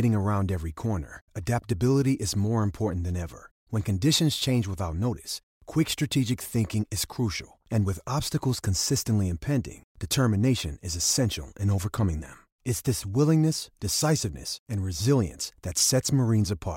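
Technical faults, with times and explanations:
0.11–16.68 s, clock slip clicks: faint, evenly spaced ticks about every 0.4 s, around forty in all, clearest on louder sustained speech and absent in pauses. The likely cause is two unlinked clocks roughly 50 ppm apart, each slip dropping or repeating one sample.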